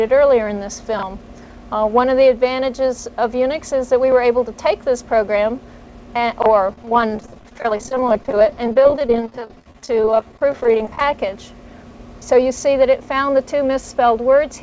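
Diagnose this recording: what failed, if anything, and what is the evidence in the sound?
Network stage: repeated packet loss (robotic sound) from 6.68 to 11.01 s. Across that span the sound turns choppy, broken by a dense run of very short holes, none longer than about 21 ms. Each hole is patched by extending the preceding sound, so roughly a quarter of the span, about 1.1 s in total, is concealment rather than real signal. The call-path band limit at 8 kHz, consistent with a wideband codec such as G.722, stays unchanged through this stretch.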